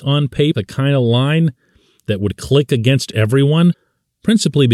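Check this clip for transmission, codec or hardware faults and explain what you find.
Two short glitches from damaged data in a compressed stream: at 0.51–0.55 s, just before "kind of line that", and at 3.70–3.74 s, right after "that would click against". Corrupted bytes make the decoder misread frames and hunt for sync, giving a brief chirp, squawk, click or short hole.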